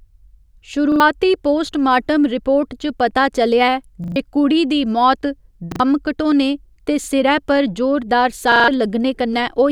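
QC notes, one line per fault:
0.92–1.00 s, repeated buffer: a 40 ms slice of the speech plays twice more after its first pass, with a hard join at each repeat. The late arrival of new audio produces a short stutter, and about 70 ms of what followed never plays.
4.04–4.16 s, repeated buffer: the same 40 ms piece sounds three extra times in a row. The repeat length fits a 40 ms buffer being replayed while the device waited, giving a longer stutter and a gap of roughly a tenth of a second.
5.72–5.80 s, repeated buffer: two extra plays of one 40 ms stretch, each butted against the last with an abrupt edge. This is heard as a quick double stutter, and about 70 ms of the following audio is skipped.
7.04–7.08 s, repeated buffer: a single extra play of a 40 ms stretch. With only one repeat it comes across as a short stutter with a hard join, and about 40 ms of audio is lost.
8.52–8.68 s, repeated buffer: the worst instance, with four extra plays of the same 40 ms piece. 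The repeating at a 40 ms period gives a stutter, and roughly 150 ms of speech is dropped once playback resumes.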